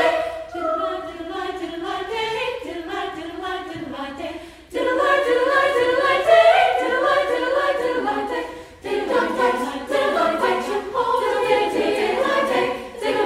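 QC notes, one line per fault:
No faults found on listening; nothing to flag.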